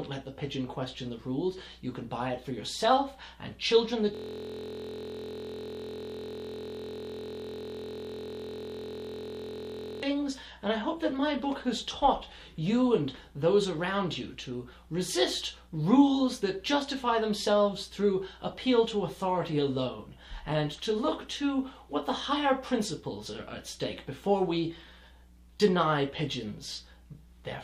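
From 4.15 s to 10.03 s the audio collapses into a steady, rough buzz at about 43.1 Hz. The same 23.22 ms fragment repeats exactly, hundreds of times over, until normal sound resumes. This is a system hang loop. The computer or its audio driver stopped supplying new data, so the sound hardware kept replaying whatever sat in its ring buffer. A loop this short, which fits a 1024-sample buffer, fuses into a pitched buzz rather than an audible stutter.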